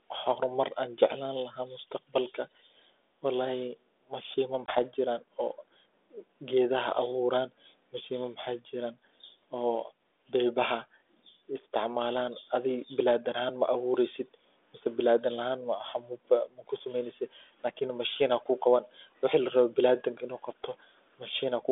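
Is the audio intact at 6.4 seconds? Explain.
Yes, at 6.4 seconds the speech is intact and carries only the light character of the 32 kbit/s G.726 ADPCM telephone path, with no fault at that moment.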